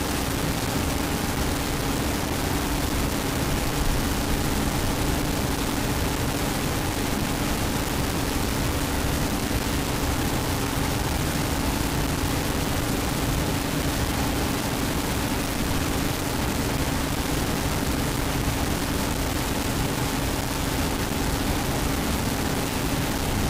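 From start to finish the sound is coarse and grainy, with a harsh distortion that tracks every change in level and quiet passages sputtering or dropping out. This is likely low bit depth without dither: rounding to about 3 bits leaves an error nearly as loud as the sound itself.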